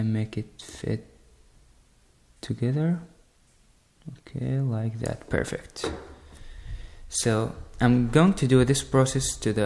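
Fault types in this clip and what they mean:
No faults of any kind are audible anywhere in the audio.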